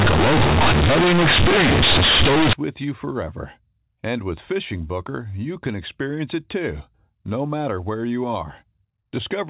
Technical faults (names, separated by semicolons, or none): companded audio read as linear